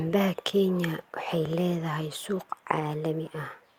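Nothing goes wrong anywhere in this bit of speech, so there's no fault to walk through.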